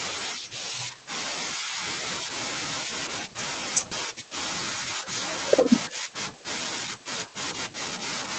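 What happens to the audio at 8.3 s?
Nothing goes wrong at 8.3 s: the speech continues intact, carried by the call codec with its upper frequencies limited to about 8 kHz.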